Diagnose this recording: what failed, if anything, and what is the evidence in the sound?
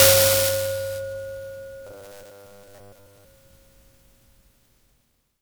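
Codec stage: generation loss throughout the music, with swirly, hollow, smeared tone and blurred attacks, likely from roughly ten successive MP3 re-encodes at 128 kbit/s.

Driver or buffer stage: robotic sound from repeated short buffers between 1.87 and 3.25 s, a metallic 100 Hz buzz, likely from a 10 ms block replayed in place of most incoming audio.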